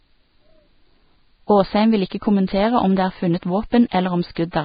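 It's a short speech clip with heavy damage the whole way through, likely from Vorbis compression at a low setting, roughly 16 kbps. Nothing survives above about 4.9 kHz, the treble that remains is coarse, hissy grain, and consonant attacks come out smeared.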